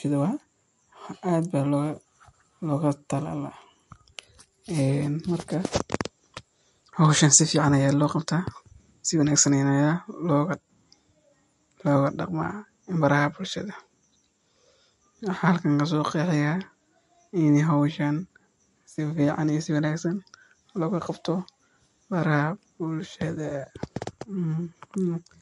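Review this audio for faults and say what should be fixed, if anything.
Right through the speech there's a hard ceiling at 11.3 kHz, plus a watery, swirly quality, likely from MP3 compression at a low bitrate, roughly what 46 kbps would give. Starved of bits, the encoder chopped the treble and let weak frequency lines flicker between frames. Next time, keep the original file or encode at a much higher bitrate.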